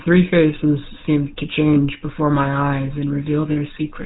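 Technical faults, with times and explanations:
Throughout: GSM full-rate codec. The speech has the plainly audible buzzy, gravelly texture of first-generation GSM coding, consistent with the 13 kbps full-rate scheme. The coder keeps a model of the vocal-tract resonances but replaces the fine detail of the excitation with a sparse, regularly spaced pulse train, which produces the rasp. Nothing above 4 kHz survives, so the sound is dull and band-limited.
1.74 to 1.79 s and 3.52 to 3.57 s: lost GSM frames. At each point the sound briefly freezes into a rough, metallic ring before normal decoding resumes. The decoder fills a gap by reusing the parameters of the last good frame, so the previous sound is held instead of cut. The first gap is short, fitting one missing 20 ms frame. The second is longer, fitting about 40 ms of loss.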